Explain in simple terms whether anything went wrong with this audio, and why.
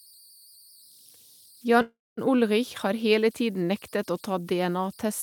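A faint, thin whistle, high-pitched at roughly 5 kHz, sits under the speech the whole way through, with a grainy hiss beneath the quieter parts. These are converter idle tones: the digitiser, lacking added noise to break them up, falls into repeating patterns that sing.

From 1.81 to 2.19 s the speech stops and a fading buzz continues, then about a quarter second of silence. This is a call audio freeze, likely from delayed network packets. Nothing was lost, so speech resumes where it left off, slightly late.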